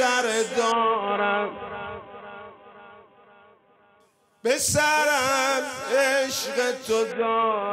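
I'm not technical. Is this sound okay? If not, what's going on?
No. Twice the sound goes dull and gritty: from 0.72 to 4.00 s, and again from 7.12 s to the end. This is a Bluetooth SBC bit pool drop. When the wireless link gets crowded, the sending device shrinks the amount of data it uses for the audio so playback doesn't stop. With so little data, the highest frequencies are thrown away and the rest is stored roughly, so the treble fades and a coarse, sandy noise appears until the link recovers.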